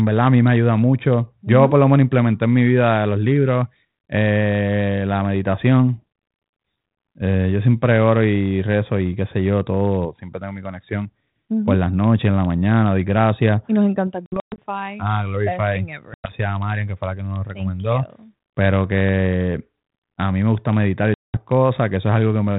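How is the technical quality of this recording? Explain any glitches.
The recording has three dropouts caused by packet loss on an ADPCM call. The call itself sounds like G.726 ADPCM at 32 kbit/s, which adds only light coding damage.

Dropouts occur at 14.26 to 14.59 s (about 200 ms lost in bursts over 320 ms, the longest 120 ms), at 16.14 to 16.33 s (100 ms), and at 21.14 to 21.37 s (200 ms). Missing packets were filled with silence, leaving abrupt holes. The receiver's adaptive predictor and step size then no longer matched the sender's, so the speech resumes with a click, a level jump or brief distortion before settling.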